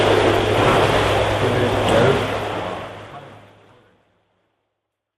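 There are no technical faults in this clip, and the smooth fade-out from about 2 s to the end is deliberate editing.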